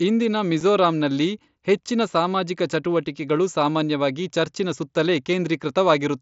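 Unconcealed Bluetooth headset packet loss occurs at 0.60 s, where roughly 7.5 ms of speech drops out between headset and phone. Nothing fills the gap with a guess at the missing sound, so silence or an idle pattern takes its place. The result is a brief hole with hard edges, a length that fits a single lost frame on the wideband mSBC link, which carries the speech up to 8 kHz with light graininness.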